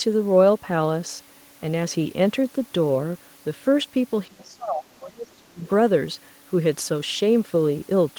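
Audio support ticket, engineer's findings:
Speech suppressed in double talk, 4.28 to 5.62 s: talker drops sharply, deepest dip around 30 dB, pumping in pieces. Likely echo canceller unable to separate near talker from loudspeaker echo during simultaneous speech, so it attenuated both.

Other side's voice leaking through, 5.65 to 5.69 s: brief faint scrap of far-end voice, roughly 30 dB below the talker. Likely residual loudspeaker echo that the echo canceller failed to remove from the microphone path immediately after the suppression.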